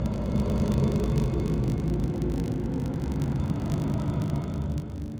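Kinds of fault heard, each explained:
Filter restarted on every block: the filter state resets each block, so a small transient starts every one, heard as a 50 Hz buzz that tracks the sound's level throughout.
Doubled audio track: from 0.39 s to 3.33 s a full-band copy trails by roughly a third of a second at about equal level, dry and abruptly switched, likely from a second, slower capture path.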